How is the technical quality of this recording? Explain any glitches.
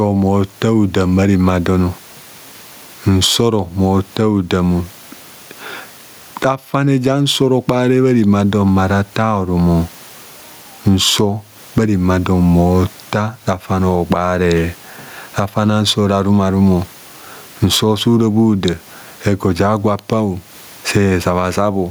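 The recording has one audible fault, gain pumping, throughout. Gain is likely set far too high, so a fast limiter clamps each loud syllable. Background noise sits about 42 dB below the speech, and the gain swings by around 15 dB. The waveform shows flattened peaks and a breathing noise floor.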